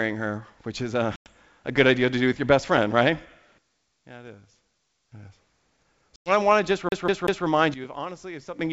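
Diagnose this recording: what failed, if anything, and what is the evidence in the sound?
Packet loss on an ADPCM call, a network fault, appears twice. At 1.16 s, just after "her which is a", a hard-edged hole of about 100 ms opens, which fits roughly five lost packets. A similar gap follows at 6.16 s, just before "I want to just". Silence filled each gap, so the decoder's predictor and step size no longer matched the sender's. The speech comes back slightly distorted, then settles within a few tens of milliseconds.

A sudden gain jump happens twice, most likely a digital gain setting applied in call processing without a ramp. From 3.58 to 5.12 s the level drops by about 13 dB, and from 7.74 to 8.59 s it drops by about 12 dB. In both places the speech and the background noise change level together from one sample to the next. A step that abrupt points to a level change with no fade rather than anything acoustic.

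A CD stuck on one turn is a playback fault from the storage medium. Between 6.89 and 7.46 s, right after "I want to just", a 190 ms piece of audio plays three times, with a short mute at each jump back. A scratch sends the laser back one track at the same point on every turn of the disc, which gives the fast, even stutter of a skipping CD. The G.722 wideband coding along the path keeps the speech clear up to about 7 kHz.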